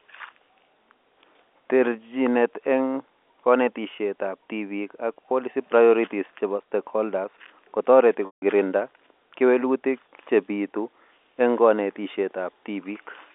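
At 5.15 s there is packet loss with pitch repetition: a gap of about 20 ms, which fits one lost packet, is filled by repeating the last pitch period, so the sound briefly holds with a slightly buzzy quality. From 8.26 to 8.42 s a longer 160 ms loss occurs. The repeated period fades out over roughly 50 ms, leaving silence until the speech resumes through a short cross-fade, all within the 200 Hz to 3.6 kHz telephone band.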